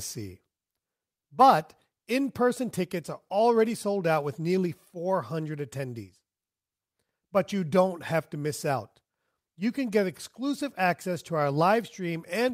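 No technical faults can be heard in this speech recording. Nothing in it calls for a timestamp or a closer look.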